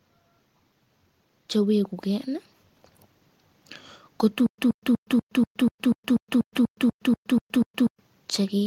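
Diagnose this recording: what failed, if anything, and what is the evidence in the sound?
A stutter with silent gaps runs from 4.46 s to 8.00 s in the speech. A single 123 ms fragment repeats 14 times, each followed by about 120 ms of digital silence, giving a steady 243 ms cycle. The stall most likely sits in the playback or streaming buffer: on each retry it replayed the last fragment it held, then ran dry. The speech that belonged in that stretch is lost.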